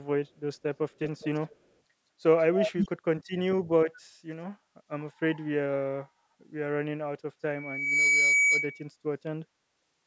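A speech recording, with two brief stretches where a delayed copy of the talker trails the original by about 202 ms: from 1.01 to 1.56 s, sitting roughly 10 dB under the speech, and from 2.39 to 2.89 s, louder at only about 5 dB below. That fixed 0.2 s lag is the signature of echo leak, most likely from a far end playing the call over a loudspeaker whose echo canceller let part of the returning sound slip back into the line. Later, from 7.52 to 8.89 s, a single pitch near 2.3 kHz swells over roughly half a second into a sustained whistle that ends up about 5 dB louder than the speech itself. This is loudspeaker feedback squeal: a microphone is catching the speaker it feeds, and at that one frequency the loop gain climbs past unity, so the tone keeps feeding itself. The call's microphone processing can be heard in the band limit, with nothing above 8 kHz.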